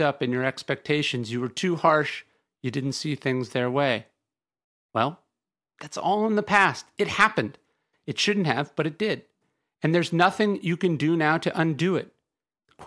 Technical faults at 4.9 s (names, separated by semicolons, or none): none